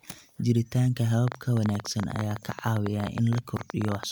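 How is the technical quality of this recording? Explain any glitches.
The recording is marred by a train of clicks from 1.28 s to 4.04 s. It sounds like a fast, uneven ticking laid over the speech, roughly forty sharp pops at about 13.4 per second, peaking around 10 dB above the speech, so they stand out clearly and carry on through the pauses. Because the clicks share much the same shape but arrive at irregular intervals, the likely cause is electrical interference from nearby equipment or a faulty connection or power supply.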